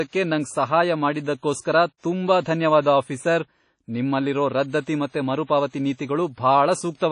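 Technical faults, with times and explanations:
Throughout, WMA compression. The speech rings and sounds washy, and a hiss swells and fades with it. Nothing is heard above 10.1 kHz. The likely cause is heavy transform coding, which fits a bitrate near 32 kbps, discarding weak detail and smearing noise.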